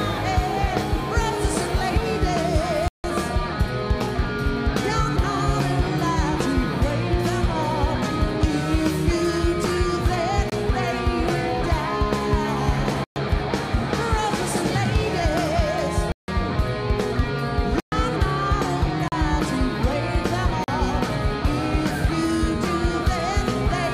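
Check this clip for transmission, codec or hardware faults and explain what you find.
The clip has one fault, a block of digital silence, occurring seven times: 2.88–3.04 s, 10.50–10.52 s, 13.04–13.16 s, 16.12–16.28 s, 17.80–17.92 s, 19.08–19.12 s and 20.64–20.68 s. Each is an abrupt hole, from a short hole at 23 ms to a clear dropout at 160 ms. Samples were replaced by zeros, likely because the output buffer wasn't filled in time, so the audio cuts in and out without a fade.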